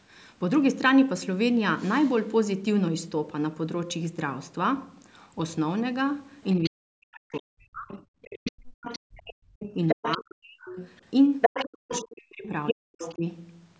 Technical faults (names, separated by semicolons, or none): other side's voice leaking through; speech suppressed in double talk